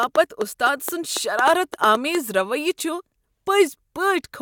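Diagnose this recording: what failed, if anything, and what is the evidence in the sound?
Sharp, same-shaped ticks pop over the speech from 0.03 to 2.16 s, about ten of them at roughly 5.2 per second, unevenly spaced and well above the speech level. This train of clicks likely comes from interference in the analogue wiring or a struggling interface.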